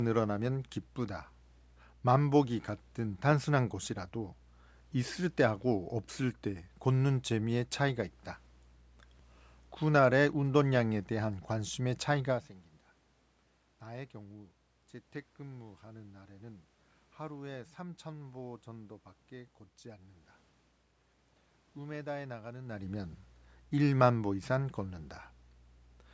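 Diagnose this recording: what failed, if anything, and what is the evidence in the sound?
A steady ticking, roughly every twentieth of a second from 0.14 s to the end, is clock slip clicks, likely from two unsynchronised converter clocks drifting about 400 ppm apart.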